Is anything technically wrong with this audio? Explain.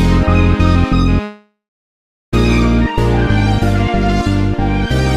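Yes. A call audio freeze occurs from 1.23 s to 2.34 s. The sound stalls, then the last bit of audio carries on as a fading buzz or hiss. About 740 ms of that stretch is silent. The likely cause is packets held up in transit, so the jitter buffer ran dry and the receiver filled the wait. About 1.09 s of gap was inserted. The audio then resumes where it stopped, with nothing lost, just delayed.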